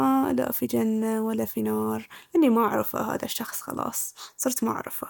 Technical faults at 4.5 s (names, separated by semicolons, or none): none